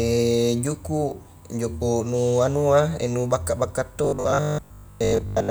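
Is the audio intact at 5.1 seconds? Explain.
No. At 5.1 s the speech is inside a stretch of robotic sound from repeated short buffers running from 4.05 s to 5.50 s: a rigid, metallic 50 Hz buzz that loosely tracks the speech, likely from about 20 ms chunks being looped while most of the real audio is skipped. Unlike a stutter, which audibly repeats whole syllables, these loops are too short to hear individually and fuse into one fixed pitch.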